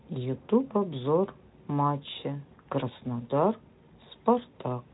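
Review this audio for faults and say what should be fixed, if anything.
Nothing here needs fixing; no faults were found.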